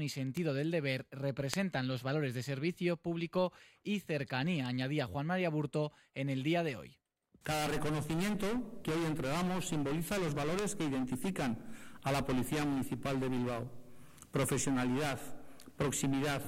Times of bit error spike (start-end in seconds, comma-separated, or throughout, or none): 0.37, 1.54, 4.66, 7.45, 10.59